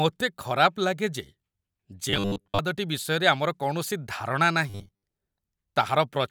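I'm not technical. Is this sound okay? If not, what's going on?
No. From 2.10 to 2.59 s and 4.70 to 5.03 s the speech becomes a metallic 100 Hz buzz: robotic sound from repeated short buffers, likely looping about 10 ms of audio.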